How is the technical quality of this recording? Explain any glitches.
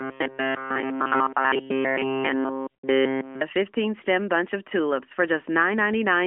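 The speech passes through the AMR narrowband mobile codec. The band is limited to about 250 Hz to 3.4 kHz, with light coding damage that fits the 12.2 kbps mode. There is one glitch.

AMR bit errors occur from 2.70 to 2.76 s. This fits three damaged frames, with roughly one bit in twenty flipped. Misplaced excitation pulses and skewed gain and spectrum values make the voice briefly hoarse, scratchy and gargly.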